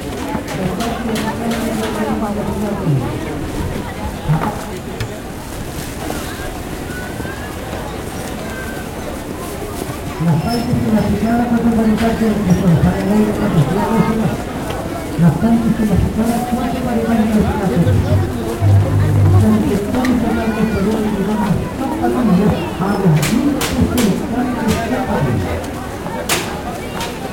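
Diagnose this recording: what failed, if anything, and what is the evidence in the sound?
The converter failed, with sample clock jitter throughout. A hiss-like roughness rides on the sounds. It is strongest on loud, bright passages and gone in pauses. The clock wanders by roughly 10 microseconds. Steep waveform slopes turn this mistiming into noise about 25 dB down.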